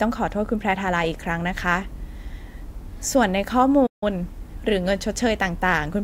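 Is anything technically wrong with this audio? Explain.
Yes. From 3.86 to 4.03 s the speech cuts out mid-flow into roughly 150 ms of silence, then resumes. This is a playback stall, likely caused by the player running short of buffered data or its output thread being briefly blocked.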